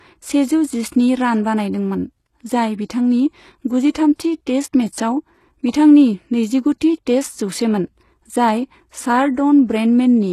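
Right from the start and all the way through, the speech carries the sound of what is likely HE-AAC compression, and the damage is plainly audible. The lower band is coded directly, but the treble is rebuilt by copying lower bands upward under a coarse envelope, so its harmonics don't line up with the real ones. S sounds come out gritty and lispy, nothing reaches above about 12.3 kHz, and it all fits a very low bitrate of around 16 kbps.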